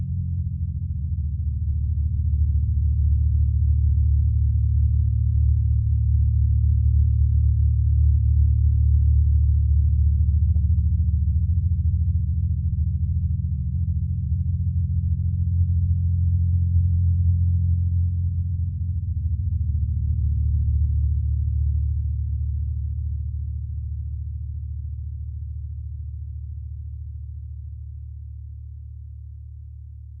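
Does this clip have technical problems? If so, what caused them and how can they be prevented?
No, nothing stood out as a technical problem on listening to this sound.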